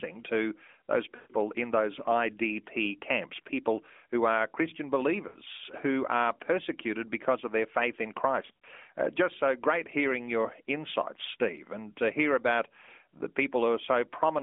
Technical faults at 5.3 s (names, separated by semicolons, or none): lost AMR speech frames